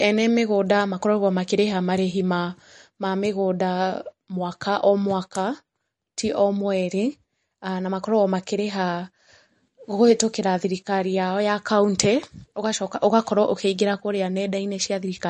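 MP3 compression damage runs through the whole speech clip, with nothing above about 11.1 kHz and a plainly audible watery, swirling quality. This is likely a low-bitrate encode, roughly 40 kbps, where the encoder cut the treble and dropped weak frequency lines that flicker between frames.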